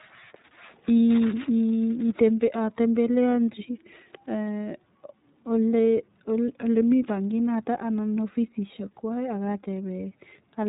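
From start to finish the speech carries the iLBC codec's signature. Nothing gets through above about 3.8 kHz, so it sounds boxed-in and narrowband. Each frame is coded on its own, which fits 30 ms frames at 13.33 kbps, and that leaves a plainly audible rough, slightly synthetic edge.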